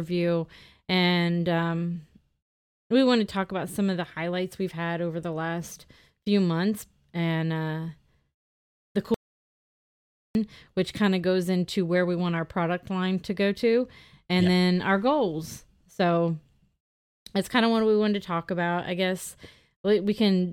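An audio dropout to silence runs from 9.14 s to 10.35 s in this speech recording: the sound cuts off abruptly mid-flow and returns just before "which kind of goes", leaving about 1.2 s of silence with no room tone underneath. The likely cause is a momentary loss of the input signal, such as a disconnected device, a failed link or a brief mute, while recording carried on writing zeros, so whatever was said in that gap is lost.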